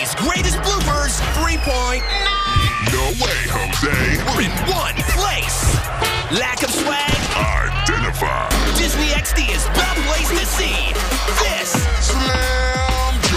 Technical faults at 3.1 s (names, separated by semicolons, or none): none